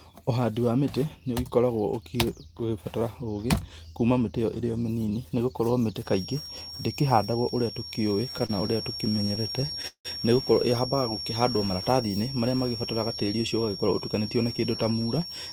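At 5.98 s a feedback whistle enters and stays to the end of the speech. It is a thin, steady tone at 5.5 kHz, about 10 dB below the speech. Its level swells and fades slowly. The likely cause is a loudspeaker-to-microphone loop held just at the edge of feedback. One frequency keeps ringing through that loop. It never grows into a full howl.

From 8.31 s to 10.07 s there are repeated stalls, a stutter. Packets arrived late, and the playout buffer kept running dry. There are 22 short stalls. In each, the receiver stretched the last sound to cover the wait. Together they fill 412 ms, nearly a quarter of that span. The longest lasts 174 ms. Nothing is lost, but the speech drags and catches.

Between 10.95 s and 11.58 s comes a jitter buffer slow-down. The buffer needed more audio in reserve. So the receiver repeated single pitch periods and small slices of pauses. This added 52 ms. The speech plays at 93% speed. 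The pitch does not change. Sounds are drawn out, and there may be a faint warble.

From 13.57 s to 15.01 s there is a jitter buffer speed-up. Here the buffer held more than its target. The receiver trimmed short pieces of one or a few pitch periods, again and again. Around a tenth of a second is removed. The speech runs at 107% speed. The pitch stays the same, but the speech sounds slightly hurried. The whistle continues underneath.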